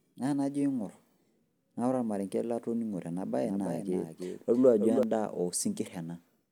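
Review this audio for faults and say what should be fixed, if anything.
A doubled audio track, likely from a second, slower capture path or an edit holding two out-of-step copies, runs from 3.45 to 5.03 s. A dry copy of the speech trails about 300 ms behind, about 5 dB quieter, and starts and stops abruptly. Route each source through a single capture path and check edits for overlapping duplicate regions.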